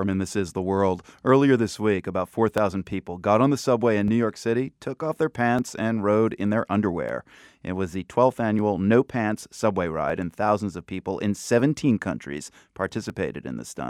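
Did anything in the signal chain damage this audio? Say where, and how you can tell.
Yes. From 1.07 s to 13.10 s the speech carries a click about every 1.5 s, around ten in all, evenly spaced regardless of what is being said. That regularity points to the buffer stage, most likely clock drift buffer slips between two devices whose clocks disagree by a few hundred ppm, each slip dropping or repeating a few dozen samples. A spectrogram shows thin broadband vertical lines at fixed intervals; the waveform shows abrupt step discontinuities at each one.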